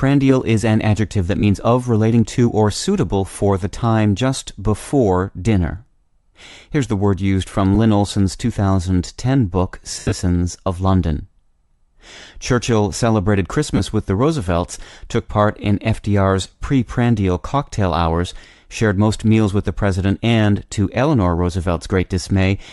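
Speech throughout, with a breathy, grainy edge on the top end and a plainly noise-filled treble, most likely Bluetooth LC3 compression at a modest rate, around 48 kbps with 10 ms frames. On top of that there are lost LE Audio frames. Short gaps at 1.40–1.44 s (about 30 ms, fitting three frames), 7.75–7.77 s and 13.77–13.81 s get patched over by the decoder reusing the last spectrum with scrambled signs, so they come through as brief noisy smears. The roughest patch is 9.92–10.12 s, where losses are scattered over 200 ms and the longest run is about 70 ms, long enough that the smear starts fading down toward silence.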